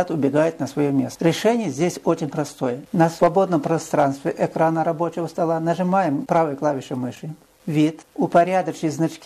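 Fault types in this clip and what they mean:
No technical faults can be heard anywhere in this clip. There is nothing in the sound to list.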